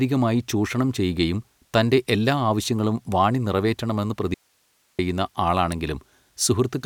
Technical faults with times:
4.34-4.99 audio dropout to a faint residue

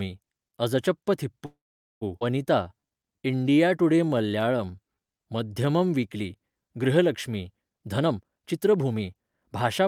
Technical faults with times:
1.45-2.03 call audio freeze
2.19-2.23 skip ahead
2.63-5.66 jitter buffer slow-down
7.73-9.82 jitter buffer speed-up

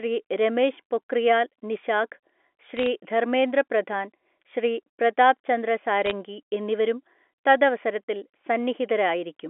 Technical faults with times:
2.77-2.86 bit errors on a digital phone line
6.06-6.11 bit errors on a digital phone line

